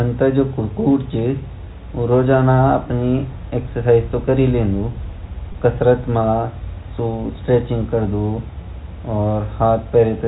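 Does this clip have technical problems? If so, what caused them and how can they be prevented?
Yes. Packet loss with pitch repetition occurs at 5.52 to 5.54 s. The receiver repeated the last pitch period across a 20 ms gap, fitting one lost packet, which produces a brief buzzy hold. The waveform shows identical repeating cycles, and the spectrogram shows flat, frozen harmonics. Forward error correction and a less congested network path would prevent it.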